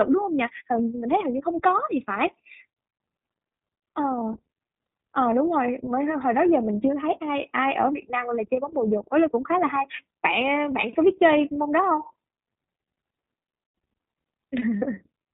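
The whole thing runs through the iLBC codec, and you can plainly hear it. Everything above 4 kHz is gone, and the speech has that slightly rough, synthetic edge from coding each 30 ms frame's excitation independently, which fits the 13.33 kbps mode. Then right near the end, from 14.79 to 14.82 s, there are lost iLBC frames, really just one 30 ms packet. The decoder fills it by repeating the last pitch cycle with some noise mixed in, so you get a brief held, buzzy vowel, and it snaps back straight away.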